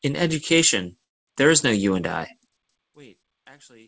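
From 1.04 to 1.29 s, a call audio freeze leaves about 230 ms of silence, a blank spectrogram column, likely from a starved jitter buffer. The speech then resumes intact, only delayed.

From 2.87 s to the end, one channel is likely inverted; in mono, the speech drops about 32 dB and the waveform collapses to a faint residue.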